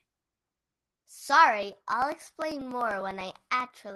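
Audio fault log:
1.63–3.90 s, periodic USB or driver dropouts: a regular train of small ticks every 0.099 s, around twenty, heard only under the speech. A stall at a fixed interval makes the driver skip about a millisecond of audio each time, splicing the waveform.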